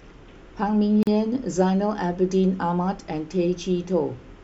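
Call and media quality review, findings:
Brief dropout in the speech at 1.03–1.07 s, about 41 ms of silence with smeared edges; sound resumes where it stopped. Gap at a join of encoded pieces: separately encoded segments concatenated untrimmed, encoder start delay and last-frame padding retained at the splice.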